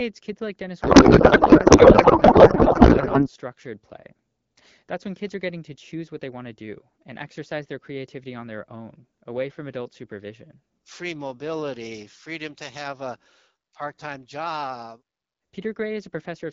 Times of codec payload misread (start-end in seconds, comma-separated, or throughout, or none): 0.81-3.28